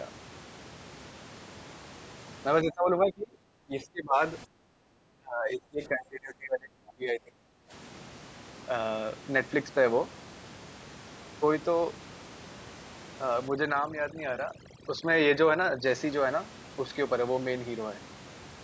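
From 2.63 to 4.20 s and again from 4.45 to 7.72 s, the talker's level sinks in patches by as much as roughly 25 dB, with parts thinning or dropping out. This is likely speech suppressed in double talk: an echo canceller, unable to separate the near talker from loudspeaker echo while both sides spoke, attenuated everything.

Between 13.48 and 15.87 s, overdone noise removal takes hold. The room noise, which sits about 18 dB below the speech, drops and breaks up into twinkling specks, and the voice's quieter spectral components are gated away along with the noise.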